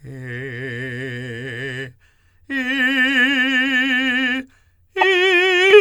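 A music clip with damaged data in its compressed stream: corrupted bytes made the decoder misread frames and hunt for sync, producing a brief glitch from 4.98 to 5.04 s.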